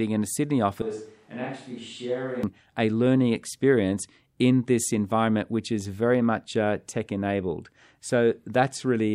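A speech clip. From 0.82 to 2.43 s, before "a learning experience in", the voice turns suddenly hollow, roomy and about 10 dB quieter. This is likely a switch to a distant microphone.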